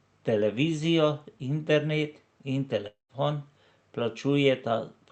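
From 2.87 to 3.11 s the speech breaks off. A buzzy copy of the last sound carries on and fades, then near-silence remains. This is likely a long network dropout. About 0.22 s of audio never arrives, and speech resumes without it.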